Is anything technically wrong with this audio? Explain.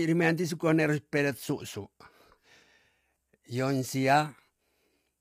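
Yes. The speech carries plainly audible codec damage from start to finish. The cause is likely low-delay AAC compression, the AAC-ELD type used in video calls. Its short frames of about 10 ms cannot separate the pitch harmonics cleanly, so each frame needs more bits. Here the bit budget sounds tight, fitting a rate near 32 kbps. The voice comes out rough and grainy. Noise fills the gaps between harmonics, and the top band sounds dulled or synthetic.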